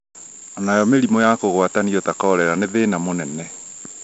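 The whole way through, this speech carries 4-bit ADPCM compression, and it's a heavy dose. Each sample is coded as a small 4-bit step off a running prediction, so the coding error rides along with the signal as a gritty hiss that swells on every loud syllable. Sharp onsets smear and crunch because the step size can't ramp up fast enough. Nothing comes through above 7.7 kHz, which fits a 16 kHz sample rate at 64 kbps, so the top end sounds dull as well.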